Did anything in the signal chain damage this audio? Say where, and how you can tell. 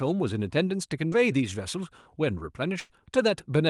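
Yes. Short concealed packet loss at 1.07 to 1.14 s, a network fault: about 40 ms arrived too late, and the decoder extended the preceding sound, leaving a brief smear.

Burst of packet loss at 2.80 to 2.92 s, also network: about 100 ms went missing, heard as the last sound held and fading before the audio jumps ahead.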